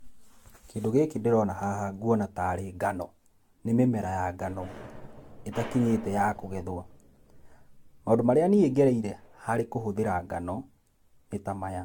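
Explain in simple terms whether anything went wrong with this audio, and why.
The speech sounds swirly, hollow and smeared from start to end, with blurred consonants. This is generation loss, likely from being compressed and re-saved about seven times.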